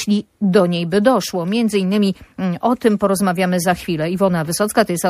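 From start to end the audio carries plainly audible MP3 compression damage, likely at a low bitrate such as 64 kbps: weak components flicker between frames, giving a watery, swirling texture, which sets it apart from simple low-pass filtering.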